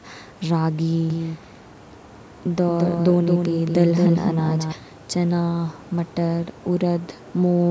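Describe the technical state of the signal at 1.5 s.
At 1.5 s the speech is heard twice: a second, full-band copy trails the original by about a fifth of a second, roughly 5 dB quieter, with no decay or room colour. It cuts in abruptly at 1.10 s and drops out just as abruptly at 4.72 s. This doubled audio track is likely the same audio mixed in a second time, either through a slower capture path or an edit leaving two copies out of step. The call microphone processing's 8 kHz band limit applies to both copies.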